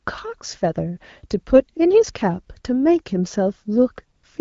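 From 4.15 to 4.23 s, AMR comfort noise appears: the phone stopped sending speech frames for about 80 ms, so the real background drops out and is replaced by a smooth, steady synthetic hiss, beneath the light coloring of the wideband HD Voice codec.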